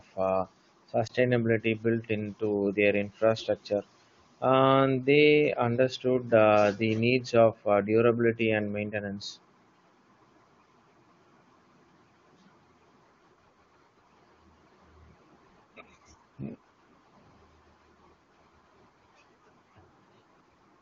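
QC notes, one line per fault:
1.07–1.12 s, lost AMR speech frame: a brief dip in the speech, lasting roughly the span of one 20 ms frame. The AMR-WB decoder received a frame that failed its checksum and concealed it by repeating the previous frame's pitch and vocal tract settings at reduced gain, so the sound smears briefly rather than cutting out. The speech then comes back weak or rough for a moment. The surrounding wideband audio is clear, which fits the codec's highest rate.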